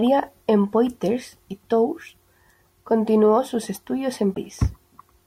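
At 4.33 to 4.37 s, the speech is broken by a short burst of damaged data in a compressed stream. For about 40 ms, part of the encoded stream was corrupted, so the decoder misread those frames, lost its place and had to find the next valid frame header before normal decoding resumed. The result is a brief glitch that breaks into the speech, heard as a chirp, squawk, click or short hole.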